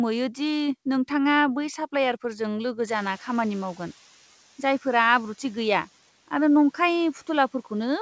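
A noise suppressor catching up is the fault in this speech recording. Around 3 s the room noise jumps by about 23 dB, and the suppressor's noise estimate still reflects the quieter earlier background, so from 2.87 s to 3.97 s it under-suppresses. The new noise first comes through with only about 5 dB of reduction, then sinks over roughly 1.1 s as the estimate adapts; after the rise the noise sits about 27 dB below the speech. Nothing reaches past 8 kHz, consistent with a G.722 call path at 64 kbps.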